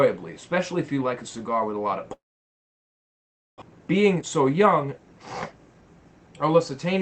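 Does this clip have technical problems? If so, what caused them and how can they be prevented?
Yes. From 2.13 to 3.64 s there is a long network dropout, likely a stall in packet delivery: the last sound stretches into a fading buzz, then near silence, and the audio returns with about 1.1 s missing. Unlike a simple mute, the gap begins with that decaying copy of the preceding sound. A steadier connection or stronger packet-loss protection would prevent it.

From 3.72 to 6.44 s, a jitter buffer speed-up plays the audio at 112% speed. The buffer had built up extra delay, so the receiver repeatedly removed short pitch-period slices, around 0.4 s in total. Unlike resampling, this keeps the pitch unchanged. Capping how fast the buffer is allowed to drain would prevent it.

The Opus call path, running at 20 kbps with content up to 8 kHz, adds its own coding character throughout.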